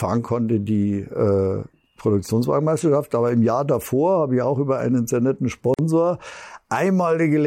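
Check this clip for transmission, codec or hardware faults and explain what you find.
One fault stands out in this speech clip. At 5.74 s, just after "über einen sehr netten", a gap at a join of encoded pieces drops about 46 ms of silence into continuous speech. The edges are smeared by the codec, and the speech then resumes where it stopped. Two separately encoded segments were spliced without trimming, leaving the encoder's start-up delay and last-frame padding in place.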